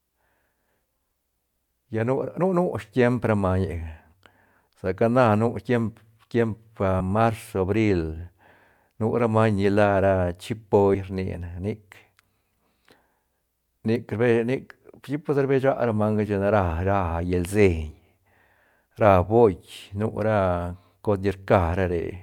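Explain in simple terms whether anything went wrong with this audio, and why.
Compressed frames were skipped at 1.14, 6.99 and 10.94 seconds. Each time, the speech jumps ahead by a fraction of a second, up to about a fifth. Whole 26.1 ms chunks went missing or were rejected as damaged.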